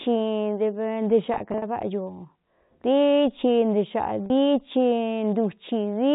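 From 1.34 to 1.62 s the speech breaks up with packet loss with pitch repetition: about 120 ms of audio is missing, scattered across 280 ms in runs no longer than 40 ms, so the receiver repeatedly holds the last pitch period and the sound turns briefly buzzy and stuttering. A single 40 ms gap at 4.26 s produces one short held, buzzy moment. The narrow telephone band of the G.711 coding is audible throughout.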